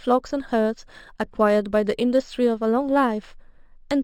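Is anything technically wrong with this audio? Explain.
Yes. Imaging from linear upsampling runs through the entire speech clip. The audio appears to have been brought up from a 12 kHz rate, which fits the 6 kHz ceiling, to 44.1 kHz by joining samples with straight lines, a crude interpolation that filters poorly. The top of the band sounds dulled, and a mirrored copy of the spectrum sits between 6 kHz and 12 kHz, roughly 35 dB below the signal. It shows up as a faint metallic shimmer on sibilants.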